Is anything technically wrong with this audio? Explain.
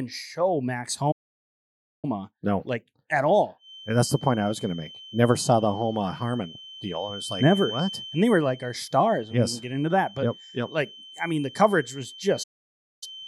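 Yes, there are two playback stalls. The player likely ran short of data or had its thread blocked, so output halted until it recovered. The speech cuts to silence mid-flow from 1.11 to 2.05 s (about 0.91 s) and again from 12.43 to 13.03 s (about 0.59 s), then resumes.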